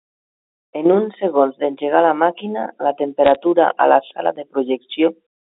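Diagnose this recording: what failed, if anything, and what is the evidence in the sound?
Bit errors on a digital phone line corrupted the G.711 mu-law stream in the network stage. Between "d'engegar la màquina la" and "a la sala de", from 3.26 to 3.36 s, a short burst of crackle and sharp ticks sits over the speech. Each flipped bit rewrites a single logarithmic sample, and hits on the sign or high-order bits jump furthest. An error rate of roughly half a percent across a handful of frames fits that dense cluster, while the telephone band of 250 Hz to 3.6 kHz around it is unaffected.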